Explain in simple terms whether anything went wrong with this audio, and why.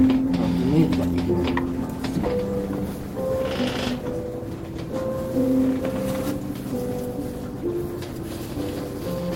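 Nothing went wrong here: the sounds in the recording come through intact, with no technical faults to report.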